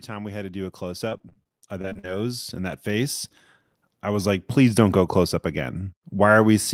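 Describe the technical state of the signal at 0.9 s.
At 0.9 s the signal is partway through an automatic gain rising event running from 0.05 to 3.24 s. The gain control, finding the input too quiet, steadily adds about 12 dB, so speech and background swell together. The waveform envelope and the spectrogram's overall brightness both climb gradually across all frequencies.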